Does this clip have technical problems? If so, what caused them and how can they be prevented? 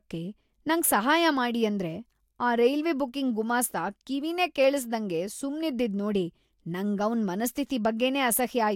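No, nothing in this speech recording points to a technical fault. There is no cause to trace, so no prevention step is needed.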